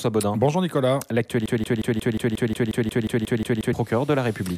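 A broken-record loop runs from 1.46 to 3.73 s: a fragment of about 0.18 s repeats exactly, back to back, 13 times, and the audio that should have played there is lost. The likely cause is a stalled player, encoder or stream resending its last buffered fragment.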